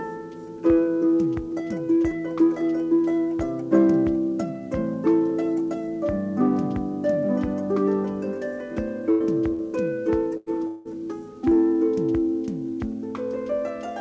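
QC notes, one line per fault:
9.11–9.23, 9.53–9.62 and 10.37–10.49 s, burst of packet loss: lost packets are concealed by extending and fading the last sound over roughly 90, 60 and 90 ms. Audio then resumes with that stretch skipped.
10.67–10.88 s, long network dropout: a fading buzz or hiss fills about 0.18 s without reaching silence, likely from an extended network outage. Audio then returns with that portion missing.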